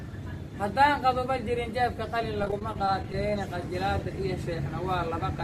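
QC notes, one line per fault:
2.42–3.14 s, repeated packet loss (robotic sound): about ten short dropouts, the longest 20 ms, cover roughly 15% of this stretch. Each hole is patched by extending the preceding sound. The rapid patching turns the audio choppy, with fragments missing.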